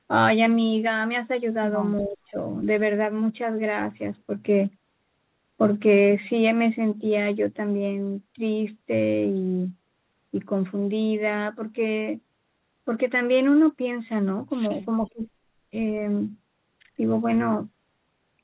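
Speech carried over a narrowband call line, with nothing above 4 kHz, which fits G.711 A-law at 64 kbps. From 2.01 to 2.38 s and from 14.92 to 15.23 s the talker is pulled down by about 15 dB and then about 25 dB, most likely speech suppressed in double talk, with the echo canceller ducking this side while the far end spoke. On a waveform the envelope caves in for about 0.3 s. A spectrogram shows the harmonics fading to near-blank bands.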